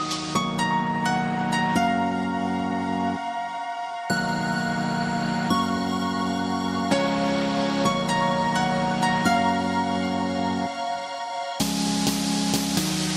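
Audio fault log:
No fault is heard anywhere in this audio. There is nothing to log.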